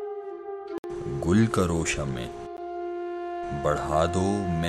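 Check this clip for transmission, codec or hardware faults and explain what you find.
Two blocks of digital silence interrupt the audio. The first runs from 0.78 to 0.84 s, a 60 ms hole. The second is at 2.57 s and lasts about 12 ms. In each, a stretch of samples was replaced with zeros, as when an output buffer goes unfilled in time. The signal drops straight to nothing and returns with no fade. The longer gap sounds like a brief dropout, and the short one like a tick.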